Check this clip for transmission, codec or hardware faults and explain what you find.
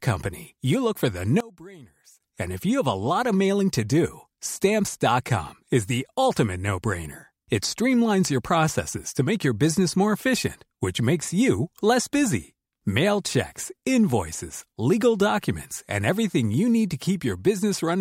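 One fault stands out. From 1.40 to 2.20 s, the speech drops by about 22 dB and turns faint. The likely cause is one channel inverted. With one side's polarity reversed, the shared centre content cancels when the channels are summed to mono. Only their small differences remain.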